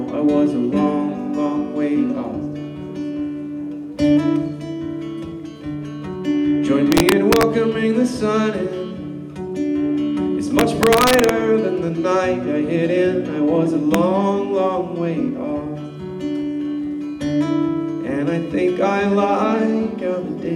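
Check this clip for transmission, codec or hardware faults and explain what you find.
Integer overflow appears three times, at 6.92 to 7.43 s, 10.59 to 11.29 s and 13.94 s. Gain pushed peaks about 3, 3 and 1 dB past the integer limit, so samples wrapped to the opposite sign, giving violent cracks far harsher than clipping.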